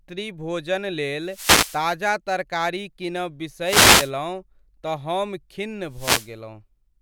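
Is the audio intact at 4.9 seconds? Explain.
Yes, the audio is intact at 4.9 seconds, with no dropout, click, distortion or other technical fault at that moment.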